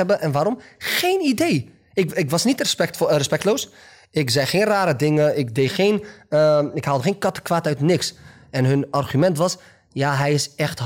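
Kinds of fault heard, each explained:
Hard clipping: the speech is driven about 2 dB past what the signal path can pass, so the loudest peaks, under one percent of samples, are sliced flat. This gives brief crackles on the peaks rather than the rounded, continuous thickening of soft saturation.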